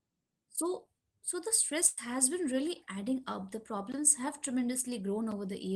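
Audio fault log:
1.86 to 1.98 s, burst of packet loss: packets lost after "so so the"; concealment holds and fades the last sound for about 110 ms, resuming at "has been".
5.31 s, block of digital silence: likely an unfilled output buffer zeroed 5.8 ms, fitting a 256-sample block; the abrupt drop and return make a tick.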